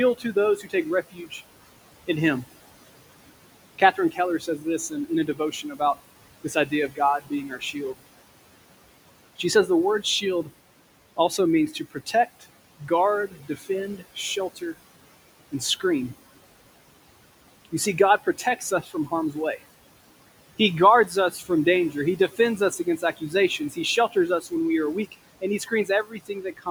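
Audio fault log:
Audio fault log:
Throughout, noise suppressor artifacts: the steady room noise, which sits about 18 dB below the speech, is pulled down by about 17 dB in the pauses and then swells back under each phrase. The gain is set band by band and frame by frame. On a spectrogram the noise floor looks mottled, with dark gaps between phrases and brighter noise under the speech. The waveform's quiet stretches sit almost flat.
0.18–1.41 s, 3.78–5.8 s, 6.44–7.76 s, 11.17–14.76 s, 17.65–19.35 s, 20.58–24.52 s and 25.12–26.67 s, speech cut by the noise suppressor: in each run, parts of the speech are treated as noise and turned down with it. The drop is deepest at about 11 to 15 dB, and it adds up to somewhere between a fifth of a second and most of a second per run. Soft consonants and word endings sound swallowed or faint, including just before and just after "we are". On a spectrogram the weak high-frequency consonant energy and the tails of words are weakened. 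The waveform shows syllable endings that collapse abruptly.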